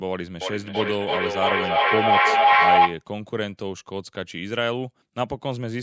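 Feedback howl runs from 0.41 to 3.05 s in this speech clip. A second device in the same room feeds the call back into the microphone, each pass gaining level, so the repeats swell into a tone near 700 Hz, pulsing roughly every 300 ms and peaking about 10 dB above the speech.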